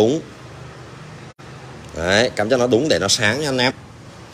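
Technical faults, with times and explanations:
0.47 s, 1.72 s and 3.69–3.71 s, damaged data in a compressed stream: each is a brief chirp, squawk, click or short hole lasting around 14 to 20 ms that breaks sharply into the sound and vanishes just as quickly. Corrupted bytes in the encoded stream left the decoder unable to read the frames there correctly. It lost sync and misread or dropped those frames until it locked onto the next valid frame header, producing these three short blips.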